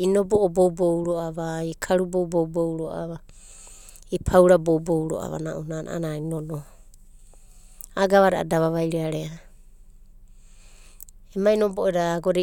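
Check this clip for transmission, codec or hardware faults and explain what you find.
Nothing wrong can be heard anywhere in this recording.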